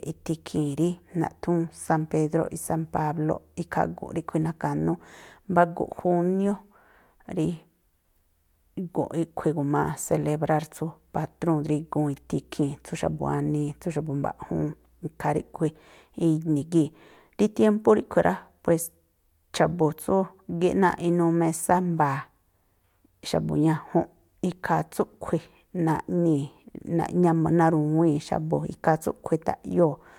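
Speech recording with no audible technical faults.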